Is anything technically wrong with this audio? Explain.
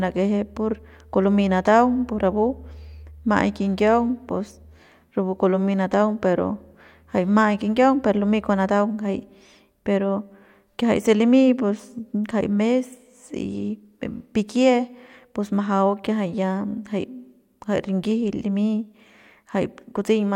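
No, nothing is technically wrong with this speech recording. No technical problem turns up anywhere in it.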